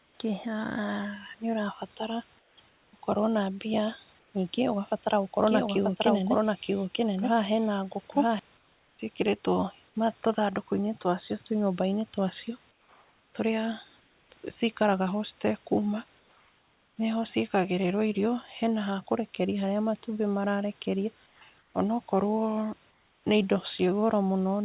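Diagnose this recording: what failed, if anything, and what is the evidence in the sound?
Comfort noise in place of the background at 0.0–0.2, 2.39–2.93, 4.19–4.34, 8.57–8.99, 12.71–14.3 (after "twa cio"), 16.19–16.97, 21.26–21.74 and 22.91–23.24 s: in the call-processing stage, the room tone becomes a flat, featureless hiss about 3–4 dB quieter, likely discontinuous transmission with synthetic fill during pauses.

Doubled audio track from 5.47 to 8.39 s: a full-band second copy of the speech runs roughly a second behind at about the same level, dry and starting and stopping abruptly. This is likely a slower duplicate capture path mixed in alongside the main one.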